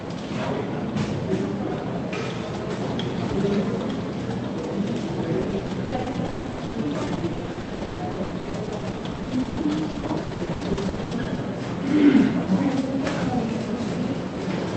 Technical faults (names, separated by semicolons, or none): repeated packet loss (robotic sound)